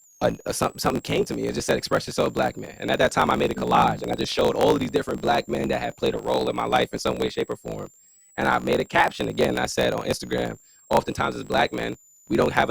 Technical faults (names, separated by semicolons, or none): switching supply whistle; block size mismatch (truncated)